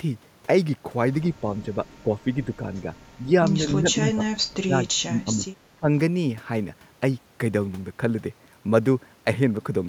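The speech dips and thins in patches at 1.41–1.77, 2.03–2.89, 3.23–3.31, 3.54–4.23, 4.43–5.45 (nearly cut out) and 5.76–5.89 s. This is likely speech suppressed in double talk, where an echo canceller ducked the talker along with the echo.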